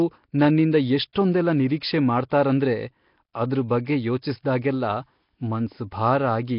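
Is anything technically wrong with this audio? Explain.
Yes. Throughout, the speech is heavily degraded: a rough, hissy halo and a smeared, underwater quality, with nothing above 5.3 kHz. This is likely Nellymoser compression at a rate fitting about 22 kbps, coding short fixed blocks with too few bits and filling starved bands with noise.

Pre-echo occurs at 1.13 to 1.15 s and again at 2.29 to 2.32 s, spreading about 25 ms ahead of sharp onsets. The codec spreads one block's quantisation noise evenly, so hiss sized for the attack leaks into the silence before it, softening each onset.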